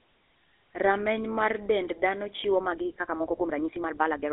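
From the start, the speech carries GSM full-rate codec damage. The sound is confined to roughly 150 Hz to 3.6 kHz, with nothing above 3.8 kHz. The excitation is rebuilt from sparse, regular pulses, so the speech sounds plainly buzzy and gravelly, which fits the 13 kbps GSM rate.

From 2.53 s to the end at 4.32 s, the pace jumps to about 1.72 times normal while the pitch stays put. This is likely a time-stretched section, squeezed by dropping short pieces. It sounds rushed.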